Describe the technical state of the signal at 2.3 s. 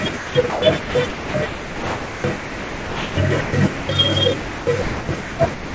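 At 2.3 s you're inside a stretch of sound chopped by the voice detector, running from 0.17 to 3.89 s. The sender's voice detector likely kept toggling, swapping about 2.5 s of real sound for comfort noise, so it's choppy.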